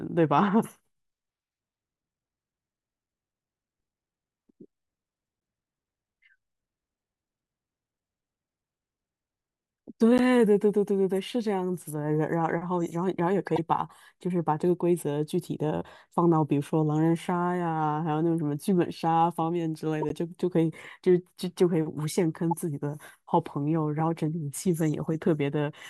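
Corrupt frames decoded at 10.18–10.20, 13.47–13.59, 20.01–20.12 and 22.51–22.53 s: damaged compressed frames were played as if valid, so misread gains and codes briefly threw energy to wrong frequencies, heard as short chirps and noise bursts peaking around -15 dBFS, the last around -20 dBFS.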